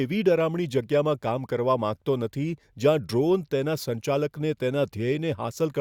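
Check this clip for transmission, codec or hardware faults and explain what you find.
No audible fault turns up anywhere in the speech recording; the signal stays continuous and stable throughout.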